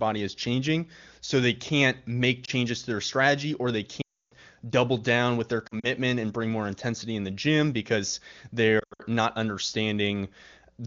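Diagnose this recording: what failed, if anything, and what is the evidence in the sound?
Lost AMR speech frames on the radio link: a brief warble at 2.45 to 2.50 s after "so they can't make", a 0.3 s dropout at 4.01 to 4.34 s, and scattered losses at 5.67 to 5.90 s and 8.79 to 9.03 s. The decoder repeats stale parameters with falling gain. On a spectrogram the harmonics smear, then fade to blank.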